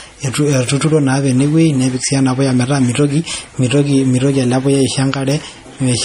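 Throughout the speech, the top end stops dead at 15.1 kHz, and faint detail flickers in and out, giving a watery, swirly texture with chirpy sibilants and smeared onsets. The likely cause is MP3 compression at a low bitrate, consistent with roughly 40 kbps.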